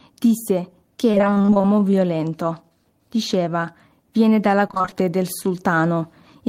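From 1.11 to 1.66 s the speech breaks up into repeated packet loss, the robotic-sounding kind. Fifteen short holes land in about half a second, none longer than 25 ms, and each one gets patched by stretching out whatever came just before. Close to half that stretch is concealment rather than real audio, so it comes across choppy, with bits of syllables simply gone.

Right after, from 1.66 to 1.92 s, there's a jitter buffer slow-down. The receiver's reserve was running low, or it had just raised its target delay. To rebuild it, it repeated small pitch-period slices and slipped in an extra 40 ms. Playback drops to about 87% speed while the pitch stays put, so the sound drags and stretches for a quarter second.

The robotic packet loss returns from 4.68 to 4.94 s, this time as seven gaps of up to 22 ms each. Again nearly half the span is filled-in repetition, giving the same choppy texture, just briefer.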